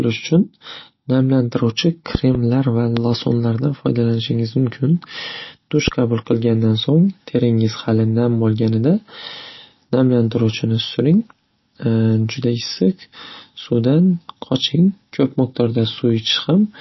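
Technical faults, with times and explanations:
Throughout: MP3 compression, likely at a low bitrate around 27 kbps. Nothing is heard above about 5.8 kHz, so the speech is dull and band-limited. Weak spectral detail comes and goes between frames, giving a watery, swirly texture, with chirpy sibilants and smeared consonant attacks.
2.15 to 2.37 s: loud pop, heard as two sharp clicks in quick succession. They peak roughly 15 dB above the speech, which continues underneath. This is most likely a voltage step or pulse, from a plug, switch or static discharge, added to the signal and briefly shaped by the following circuitry.
2.97 s: loud pop, a single sharp click roughly 15 dB above the speech, with the same likely electrical cause and the same character as the pair just before it.
5.88 s: loud pop, again a single sharp click roughly 15 dB above the speech, consistent with the same likely transient source. 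The speech carries on beneath it.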